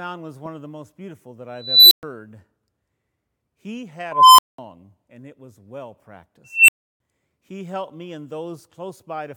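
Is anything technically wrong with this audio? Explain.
Yes. The speech has an unstable filter at 1.56–2.03 s, 4.12–4.58 s and 6.44–7.00 s. A recursive filter runs away, and a tone (around 4 kHz, about 1 kHz, around 3 kHz) swells over 0.35, 0.26 and 0.24 s, clips, then overflows into silences of 120, 200 and 320 ms. Acoustic feedback would not drop into dead silence like that.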